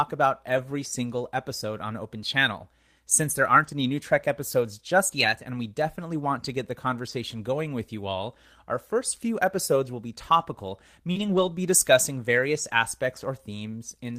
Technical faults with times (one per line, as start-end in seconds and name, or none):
0.49-0.59 lost packet rebuilt from error correction
7.09-7.11 lost packet rebuilt from error correction
11.11-11.17 short concealed packet loss
11.15-11.49 lost packet rebuilt from error correction